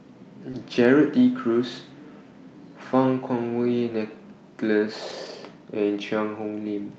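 Speech carried over an Opus call link with audio limited to about 8 kHz. Short concealed packet loss at 0.51–0.55 s: about 20 ms never arrived, and the decoder extended the preceding sound before blending back, leaving a brief smear. Lost packets were rebuilt from error correction at 0.53–0.55 s and again at 5.09–5.35 s. The second rebuild lasts 140 ms, consistent with seven 20 ms packets, and its low-rate copies sound rougher and noisier than the surrounding audio.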